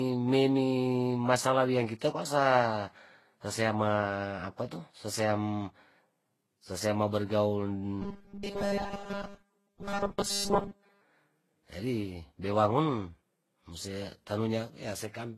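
The speech likely passed through transcoding between lossy codecs, a low-rate HE-AAC stage followed by Vorbis. Each encoder spends bits on the previous one's damage, so the different artefacts pile up, and nothing is heard above 12.3 kHz.

From 8.02 s to 11.02 s, right after "ma bergaul", fresh audio stops arriving in time. Essentially all of it is replaced by one short buffer looping over and over. That fits a 5 ms repeat and likely produces this robotic sound from repeated short buffers: a rigid, metallic 200 Hz buzz that only loosely tracks the speech.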